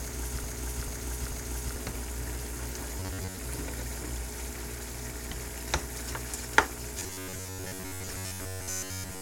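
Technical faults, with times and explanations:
0.00–1.76 s, broken-record loop: A 440 ms fragment repeats exactly, already under way at the start. A stalled stream likely kept resending it, losing the real audio.
3.00–3.37 s and 6.99–9.21 s, robotic sound from repeated short buffers: A rigid metallic buzz at 93.8 Hz. Roughly 11 ms chunks likely repeat, replacing most of the real audio.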